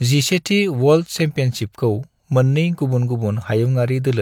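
A short recording of speech, with no technical fault to be heard anywhere in it. Nothing in the sound calls for a time, a value or a cause to be given.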